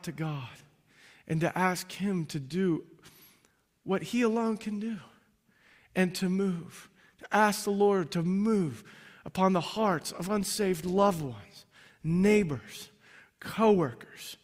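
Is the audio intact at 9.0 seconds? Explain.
Yes, the speech at 9.0 seconds plays through intact, with no dropout, click, distortion or other fault at that moment.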